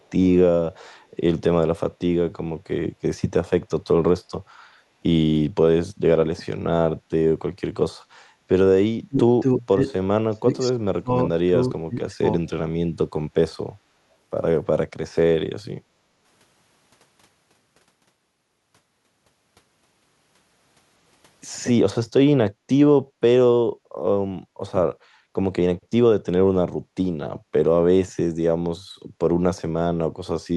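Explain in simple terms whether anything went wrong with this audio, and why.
Echo leak, from 0.02 to 0.09 s: a very faint copy of the speech comes back about a third of a second late. The likely cause is a loudspeaker on the far end whose echo canceller let a trace of its own playback slip back down the line.

Speech suppressed in double talk, at 9.07 to 9.84 s, 10.3 to 10.74 s, 11.02 to 11.55 s and 11.71 to 12.42 s: the talker's speech drops sharply or vanishes in short chunks. This likely happened because both sides spoke at once and the echo canceller turned the talker down along with the echo.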